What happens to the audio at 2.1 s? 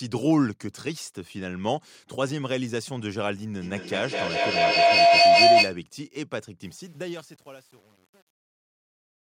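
Nothing goes wrong at 2.1 s: the speech carries on intact through that moment, with no dropout, click or distortion.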